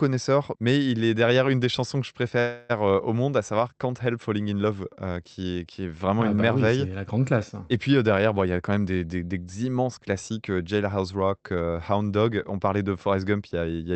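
From 2.39 to 2.79 s, after "des chansons que je", a call audio freeze stretches the last sound into a fading buzz, likely from delayed packets emptying the jitter buffer. "euh au monde à" then resumes about 300 ms late. A spectrogram shows a smeared, decaying band; the waveform shows a tapering tail.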